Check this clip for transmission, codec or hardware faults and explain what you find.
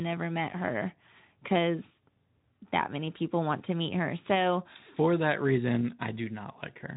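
No transmission, codec or hardware faults found in this speech clip; the Speex path at 15 kbps leaves only light coding texture.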